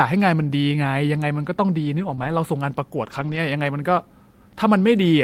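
Speech, in which packets were lost in transit on three occasions and each time the following packet supplied a low-bitrate copy, so the decoder played those copies instead of leaving holes. This is lost packet rebuilt from error correction, at 1.99 to 2.13 s, 2.19 to 2.33 s and 3.03 to 3.37 s. About 80 ms was rebuilt in each of the first two stretches and about 180 ms in the third, which points to several separate packets going missing. There are no gaps, but those passages turn coarser and noisier than the surrounding speech because the backup copies carry far less detail. Between the first two rebuilt stretches, at 2.15 to 2.19 s, audio also arrived too late to decode and had no backup, a short concealed packet loss. About 20 ms of that window was absent, and the receiver invented a fill by extending the preceding sound and then crossfading into the real signal, which leaves a brief smear or wobble in the middle of the already rough patch.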